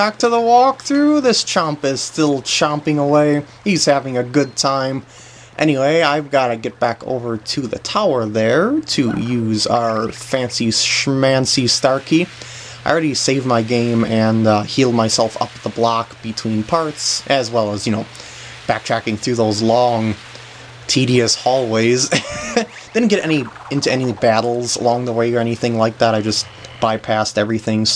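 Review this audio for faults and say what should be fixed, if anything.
No faults can be heard, so nothing needs fixing.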